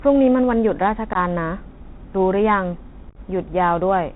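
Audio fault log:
throughout: Bluetooth CVSD headset codec. The speech runs over a narrowband link that sends one bit per sample at 64 kHz, each bit only stepping the signal up or down while the step size adapts to keep pace. The damage is plainly audible: nothing above 4 kHz survives, loud high-frequency energy outruns the step and distorts, sibilants turn scratchy, and a granular hiss sits beneath the speech, which fits a CVSD link at 64 kbps.
1.13 to 1.17 s: unconcealed Bluetooth headset packet loss. About 19 ms of audio drops out in one abrupt hole, on the order of a handful of short voice packets, and the gap is filled with nothing usable rather than patched over. The hard edges of the gap can click.
3.09 to 3.17 s: unconcealed Bluetooth headset packet loss. Here about 56 ms is lost, scattered over 67.5 ms with the longest single run at 22.5 ms, roughly fifteen packets' worth. The repeated short gaps chop the speech and give it a brief crackling, rough texture.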